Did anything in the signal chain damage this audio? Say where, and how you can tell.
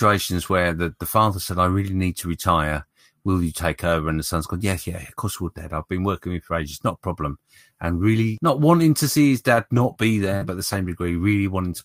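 Yes: scattered short gaps from network packet loss, 9.55 to 10.85 s, about four brief hiccups where the receiver concealed missing chunks by extending the preceding sound.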